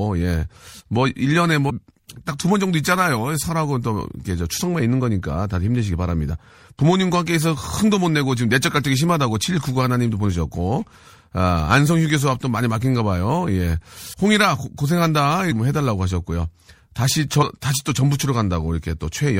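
A low-bitrate lossy encode, likely MP3 at around 64 kbps judging by how plainly the damage is heard, runs through this speech recording from start to finish. Short of bits, the encoder lets weak frequency lines flicker on and off between frames, so the sound comes across watery with a swirling texture, sibilants turn metallic and chirpy, and sharp onsets smear. On top of that come four instances of compressed frames skipped, where whole blocks of the encoded stream never reach the output, at 1.69, 14.12, 15.51 and 17.41 s. Each dropout jumps the audio forward by whole frames of about 26 ms, roughly a fifth of a second at the first and third, around 150 ms at the second and about 70 ms at the last. Because adjacent frames overlap, each jump lands as a brief smeared blip in which a slice of the speech vanishes, not a sharp click.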